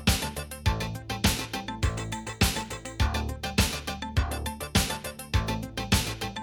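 Nothing in the recording stood out as a problem on listening.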